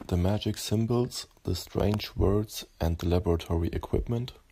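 A short burst of gritty crackle tears across the speech from 1.8 to 2.06 s, then stops. This is processor overload crackle: the processor missed a handful of deadlines for very short audio buffers, each under a millisecond, and replayed stale audio with hard edges each time.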